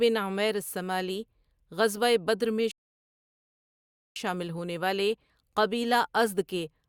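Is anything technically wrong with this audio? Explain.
Yes. From 2.71 to 4.16 s the speech halts in a rebuffering stall: playback ran dry of downloaded audio and waited about 1.45 s for more, then resumed at "شامل ہونے والے". Unlike a dropout, nothing is skipped; the sentence picks up exactly where it stopped, with time added rather than content lost.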